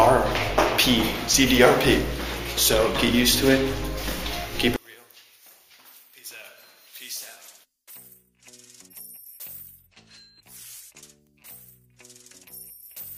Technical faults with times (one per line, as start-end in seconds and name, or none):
4.76-13.17 one channel inverted